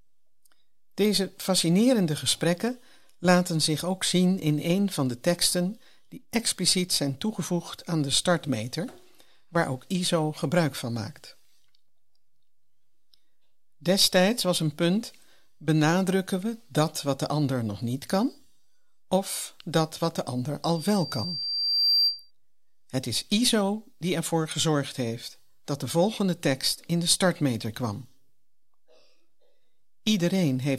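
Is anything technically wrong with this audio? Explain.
Yes, there's a loudspeaker feedback squeal from 20.75 to 22.31 s, just after "dat wat de ander". A microphone is picking up the loudspeaker it feeds, and around 4.7 kHz the loop gain tips past one, so that frequency keeps feeding itself. You hear a thin, piercing tone creep in and swell over about a second, peaking a few decibels louder than the speech before it cuts off.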